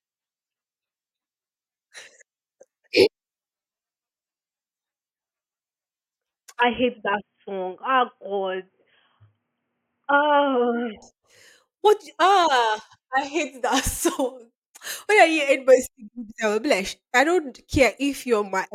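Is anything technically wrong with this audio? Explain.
Yes. From 6.61 to 11.02 s the speech turns dull and boxy, likely from the input switching to a poorer device. Nothing above 3.3 kHz gets through, the level drops by roughly 5 dB, and a faint new noise floor appears, with no gap at either switch. A spectrogram shows the upper band abruptly empty over that stretch, and the waveform shrinks slightly.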